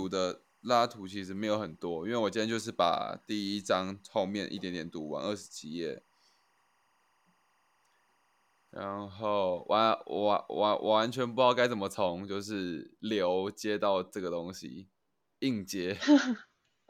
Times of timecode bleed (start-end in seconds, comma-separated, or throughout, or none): 0.00-11.83